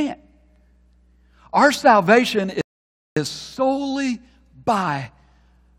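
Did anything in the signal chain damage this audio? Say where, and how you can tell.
Yes, a rebuffering stall at the playback stage. The speech drops to silence at 2.61 s and picks up at 3.17 s exactly where it left off, adding about 0.55 s. The player simply ran dry of downloaded audio and waited for more, so nothing is missing.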